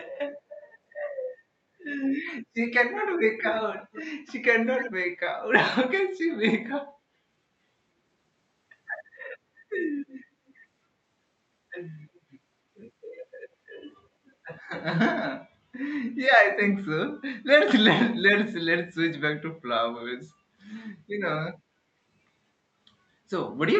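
An echo canceller on a loudspeaker end likely let its microphone's pickup slip through, returning an echo leak of the speech about 0.3 s late at 3.4–3.62, 3.78–4.02 and 4.77–4.92 s, fairly faint, and a barely audible scrap at 10.48–10.54 s.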